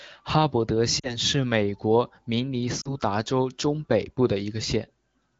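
Lost AMR speech frames at 0.99 to 1.14 s, after "哈伯德", and at 2.81 to 2.88 s, after "美国明尼". Checksum failures made the wideband decoder repeat its last good pitch and vocal tract settings at falling gain. Each gap of about 40 ms, which fits two frames, sounds like a brief drop to near silence, and the voice comes back weak or rough for a moment.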